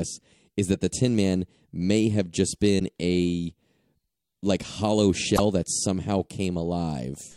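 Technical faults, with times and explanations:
2.76–2.81 s and 5.34–5.40 s, damaged data in a compressed stream: corrupted bytes make the decoder misread frames and lose sync, giving two brief glitches of about 55 ms each.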